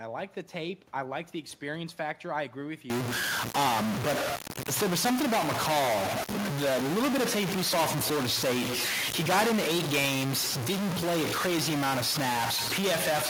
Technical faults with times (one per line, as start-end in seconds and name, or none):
2.90-13.30 stuck bit